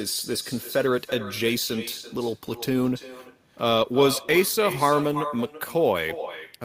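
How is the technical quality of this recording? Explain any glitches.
The recording is marred by one continuous fault. Throughout, every phrase is trailed about a third of a second later by a thinner copy roughly 12 dB quieter: echo with no canceller. The far end's loudspeaker feeds its microphone and nothing removes it.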